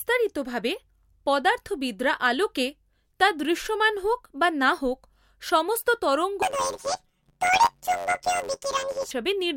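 A speech clip that, from 6.42 s to 9.12 s, right after "বা না হোক সমস্ত", turns into a robotic buzz: planar audio read as interleaved. Each 10.88 ms block stores all left samples before all right ones, but playback takes them as alternating pairs, so every block plays twice at double speed. Because the blocks are this short, the result is a harsh drone at about 92 Hz, the block rate, rather than the octave jump with flutter that long blocks give. The steady buzz and unchanged overall pace set it apart from a sample-rate pitch shift.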